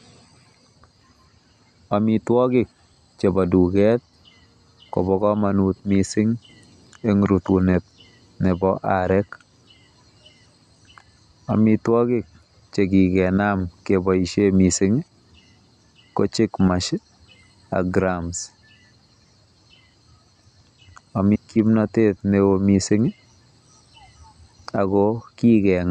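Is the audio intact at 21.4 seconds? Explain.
No. Just before that point, from 21.34 to 21.36 s, there is a stream segment skipped fault. The likely cause is that one chunk of the segmented stream failed to arrive or load, and the player moved straight on to the next chunk rather than waiting. That missing chunk takes its stretch of speech with it, so the audio jumps forward abruptly, with a brief blip at the join, and the speech resumes further along than it should.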